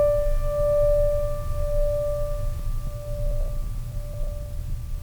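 From 2.70 s to the end, a jitter buffer speed-up cuts repeated pitch-period slices to drain excess buffering, running the music 10% fast. Unlike a resampling error, pitch holds steady while the tempo rushes.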